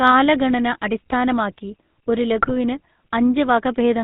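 The whole clip carries the GSM full-rate codec sound. Everything above 4 kHz is gone, and the speech has that buzzy, gravelly edge from the pulse-driven vocal-tract model, which fits the old 13 kbps full-rate coder. The damage is plainly audible.

Then there are two bursts of GSM bit errors. The first runs from 0.75 to 0.78 s, just before "അടിസ്ഥാനമാക്കി ഒരു". The second, longer one is from 2.42 to 2.51 s, right after "കാലഗണന അടിസ്ഥാനമാക്കി ഒരു". In each, corrupted filter, pitch or gain values twist the spectrum and level for a few frames, so you get a quick squawk and gargle.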